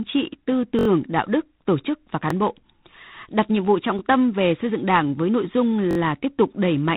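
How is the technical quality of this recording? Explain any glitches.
The recording has two problems: codec damage throughout and four short stutters.

G.726 ADPCM at 24 kbit/s runs the whole clip. The codec sends only three bits per sample, each describing the difference from an adaptive prediction of the waveform. That coarse step size leaves plainly audible quantisation noise: a harsh, rasping hiss that rises and falls with the speech level. The band also stops at about 3.9 kHz, so the speech sounds narrow and telephone-like.

A repeated buffer occurs four times. New audio failed to reach the output in time, so the device replayed the last block. Each block is about 21 ms long, which fits a 1024-sample buffer. The first is at 0.79–0.88 s, between "trị tư" and "đạo đức tổ chức", where the block plays four extra times and makes a brief buzzy stutter. The second, at 2.30–2.33 s, repeats once. 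The third, at 3.99–4.01 s, repeats once between "đặt nhiệm vụ trọng" and "tâm về xây dựng". The fourth, at 5.91–5.97 s, follows "với nội dung" and repeats three times. The single repeats sound like clicks, and each repeat has a hard join. Little or no audio is skipped.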